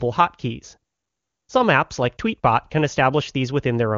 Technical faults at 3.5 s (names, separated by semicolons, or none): none